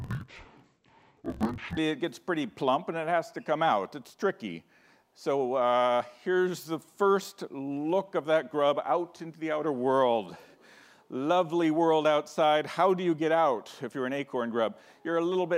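From 0 to 1.78 s the sound drops an octave and turns doubled and choppy, the classic interleaved audio read as planar, chunked at 21.33 ms, which fits a 1024-sample block.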